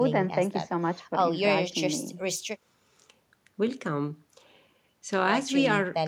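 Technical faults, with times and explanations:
No technical faults can be heard in this speech recording; the signal keeps unbroken continuity throughout.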